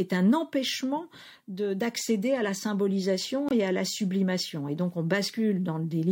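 A corrupt frame muted runs from 3.49 to 3.53 s, right after "d'accéder à la symbolisation" and before "et à la sublimation". Damaged bits in the compressed stream made the decoder reject the data, and the player substituted silence. The speech cuts off abruptly into a gap of about 40 ms, a length consistent with a single lost frame, then resumes on schedule with no shift in timing.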